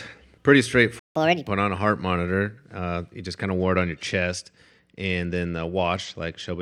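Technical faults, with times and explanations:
0.99–1.15 s, playback stall: The player most likely ran short of buffered data or had its thread blocked, so output stopped for about 160 ms. The speech cuts off mid-flow into silence, then resumes.
1.15–1.48 s, catch-up at higher speed: To recover the lost time, the player resampled its backlog at 1.5 times normal speed. Because resampling raises speed and pitch together, the speech rushes and sounds about seven semitones higher before settling just before "on a heart".
3.56–6.62 s, Bluetooth SBC bit pool drop: Just after "you just kind of", the link appears congested and the SBC encoder cut its bit pool, consistent with a fall from 31 to about 13, near 94 kbps. The top sub-bands starve and coarse quantisation adds grit, dulling the treble until the end.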